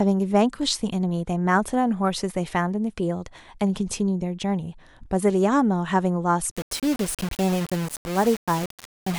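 From 6.51 s to the end, the speech turns grainy. This is low bit depth without dither, likely rounding to about 5 bits. The noise sits only about 15 dB down.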